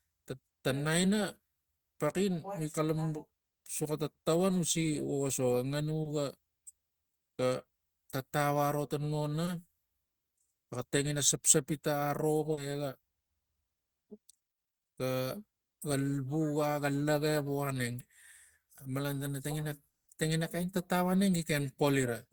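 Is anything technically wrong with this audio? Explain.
Yes, there are two kinds of network trouble in this speech clip.

First, short concealed packet loss at 6.03–6.07 s, 9.45–9.49 s and 12.53–12.59 s. Each time a brief slice of audio, about 20 ms in the first two and 40 ms in the third, didn't reach the decoder in time. The receiver patched the hole by extending what it had just played, then blended back into the real signal. You hear a quick smear or wobble at each spot, a touch longer at 12.5 s.

Second, what is likely a long network dropout at 19.89–20.09 s. About 0.2 s of audio is simply gone. Instead of a convincing patch, that stretch comes out as near silence, around 180 ms of it, before the speech picks up again further along. It's a noticeable hole rather than a blip, and whatever fell in that gap doesn't come back. Nothing is replayed or caught up afterward.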